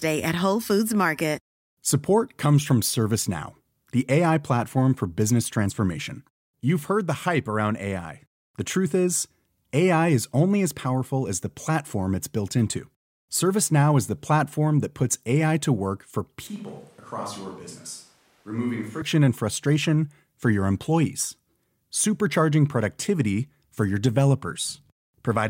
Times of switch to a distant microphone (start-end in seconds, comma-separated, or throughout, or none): 16.47-19.02